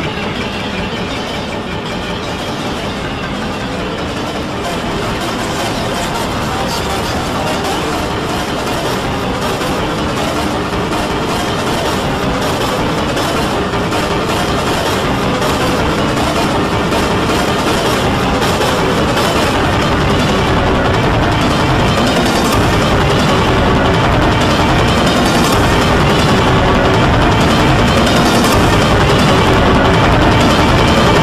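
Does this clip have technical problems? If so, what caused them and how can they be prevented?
No, nothing in this clip stood out as a technical problem on listening, so there is nothing to trace back or prevent.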